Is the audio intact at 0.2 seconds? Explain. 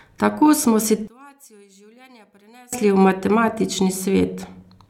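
Yes, at 0.2 seconds the speech plays through cleanly, with no dropout, click, distortion or other fault at that moment.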